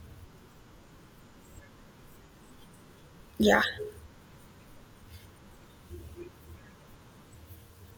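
A speech recording with AAC frame loss with concealment at two points, 2.27 to 2.33 s and 5.94 to 6.00 s. Each dropout lasts about 43 ms, which fits a single lost AAC frame. The decoder bridges each gap by rebuilding the missing stretch from the preceding spectrum rather than leaving silence, so both spots come across as a brief smeared, noisy or phasey blur in the speech.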